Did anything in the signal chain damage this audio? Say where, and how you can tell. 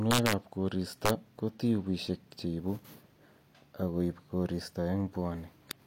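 Yes. Integer overflow in a gain or sample-format conversion stage cracks the speech at 0.11–0.33 s, 1.06–1.10 s and 5.71 s, with peaks pushed about 2, 3 and 13 dB past full scale. Instead of clamping, each peak wraps to the opposite rail. On a waveform, peaks jump from top to bottom; a spectrogram shows broadband vertical streaks.

A block of digital silence at 2.08 s points to the driver or buffer stage. A 2.67 ms run of zeros, which fits a 128-sample buffer left unfilled in time, cuts in and out with no fade and is heard as a tick. The waveform shows a short flat line with abrupt edges, and the spectrogram shows a thin full-band click at each edge.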